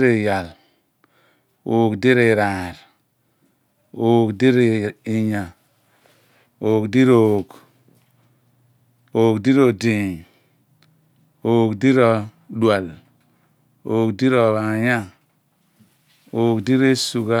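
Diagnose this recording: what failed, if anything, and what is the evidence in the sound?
No fault is audible here.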